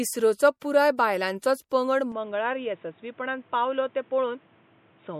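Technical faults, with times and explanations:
Throughout, MP3 compression, likely the cause of the plainly audible watery, swirling texture: weak frequency lines drop in and out from frame to frame as the encoder runs short of bits, which fits a bitrate of around 64 kbps. Nothing remains above 16.7 kHz, the fixed treble cutoff such encoders apply. Unlike a simple low-pass or bandwidth limit, the damage moves constantly, chirping on sibilants and smearing attacks.
0.60–0.62 s and 1.69 s, pre-echo: a brief hiss runs ahead of a sharp onset, spread over about 20 ms the first time and 19 ms the second. Each attack landed late in a transform block, so quantisation noise sized for the loud part also filled the quiet moment just before it. What separates it from ordinary codec swirl is its place: the hiss comes just before each attack rather than trailing after it or sitting under steady sound.
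2.12 s to the end, input switched to a poorer device, the likely explanation for the sudden change: from this point nothing passes above 3.8 kHz, the level drops by about 5 dB, and a new noise floor appears about 30 dB below the signal. There is no gap at the changeover. A codec cutoff holds for the whole clip, but this narrowing arrives all at once, and it brings its own tone and noise with it.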